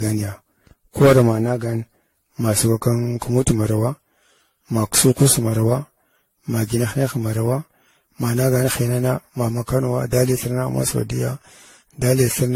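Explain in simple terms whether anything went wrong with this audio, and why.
Generation loss runs through the whole recording. The speech sounds swirly, hollow and smeared, with soft starts to sounds and nothing above 16.5 kHz. It was likely compressed and decompressed around ten times, and each pass adds new small errors that pile up.

Hard clipping occurs at 1.01–1.28 s, 2.49–2.87 s, 3.48–3.51 s, 4.97–5.33 s and 10.18–10.23 s, between "hinana ma ma kanowa" and "ma saudiyya". The loudest peaks were too big to pass through, so their tops were sliced flat and crackle. The first one is the harshest.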